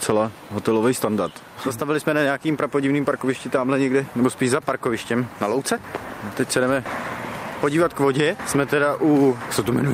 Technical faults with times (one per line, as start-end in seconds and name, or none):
none